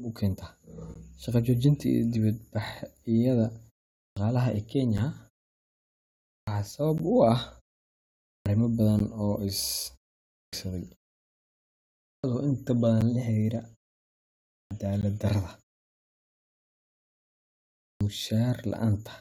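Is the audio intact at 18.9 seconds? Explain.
Yes, the audio is intact at 18.9 seconds, with no fault at that moment.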